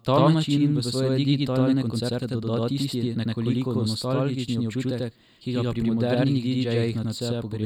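Throughout the speech, a channel delay (doubling) puts a second copy about 92.9 ms behind the first, which fits a 4096-sample buffer, and the two are summed to mono. Unlike room echo, it is one discrete repeat at equal level, with no decaying tail.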